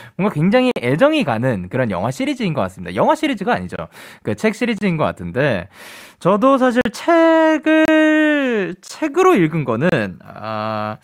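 Seven short dropouts punch into the speech, each a gap between stream segments. Two neighbouring segments' time stamps don't quite meet, so the player pads the hole with silence and the sound cuts out with hard edges, then resumes with nothing lost. They land at 0.71–0.76 s (48 ms), 3.76–3.79 s, 4.78–4.81 s, 6.81–6.85 s (41 ms), 7.85–7.88 s, 8.88 s and 9.89–9.92 s. That spacing in whole seconds fits 1-second segments.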